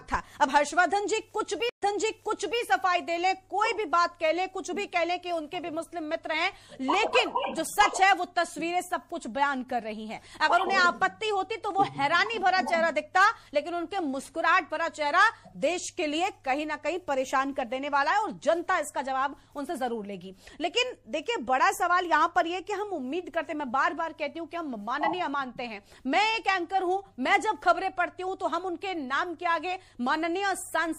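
A stream reconnect at 1.69 to 2.61 s drops the audio for about 0.12 s, then resumes 0.79 s earlier as a fresh decoder picks up a resent burst. Throughout, watery, swirly treble and smeared attacks are plainly audible, likely MP3 compression at a low bitrate around 64 kbps that cuts the highs and toggles weak frequency lines between frames.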